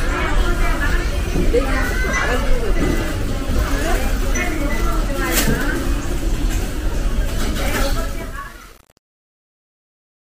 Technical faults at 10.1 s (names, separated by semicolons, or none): truncation distortion on a fade